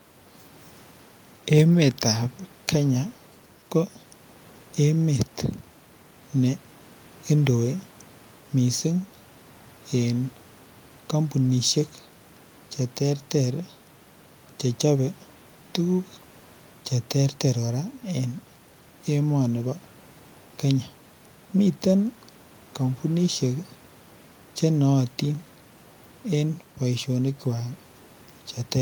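No technical faults can be heard anywhere in this recording.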